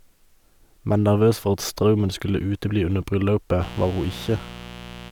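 From 3.58 s, just after "utebli under", a mains buzz sets in and runs to the end of the speech clip. Switching spikes at twice the 60 Hz mains rate leak in, about 15 dB below the signal, giving a raspy hum. On a spectrogram it shows as evenly spaced 60 Hz harmonic lines stretching into the kilohertz range.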